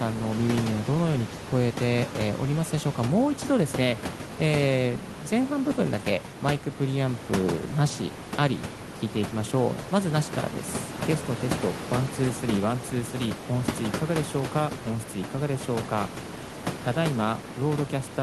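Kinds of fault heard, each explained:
No faults are present in this speech recording. A room noise sits underneath it at about 11 dB below the speech, and that belongs to the recording space, not to the system.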